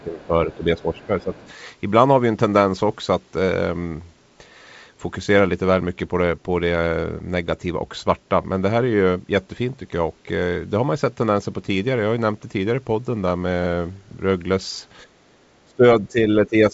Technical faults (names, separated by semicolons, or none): speech suppressed in double talk; other side's voice leaking through